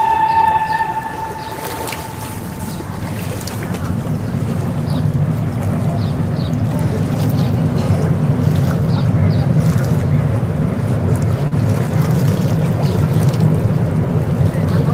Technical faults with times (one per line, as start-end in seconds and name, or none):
11.47-11.53 short concealed packet loss